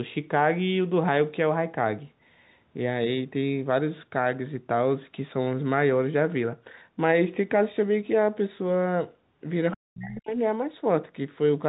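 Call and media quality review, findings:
Call and media quality review, findings:

Other side's voice leaking through, 9.71 to 9.77 s: echo canceller likely left residual loudspeaker signal in the mic path. Brief scrap of far-end voice, roughly 20 dB under the talker, lasting about 60 ms.

Speech suppressed in double talk, 9.76 to 10.35 s: canceller likely unable to separate near talker from echo during overlap, attenuating both. Talker's level dips in chunks over about half a second, deepest drop around 40 dB. G.711 mu-law path: band tops out near 4 kHz.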